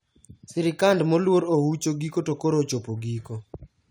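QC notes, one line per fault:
No faults found in the speech on this pass.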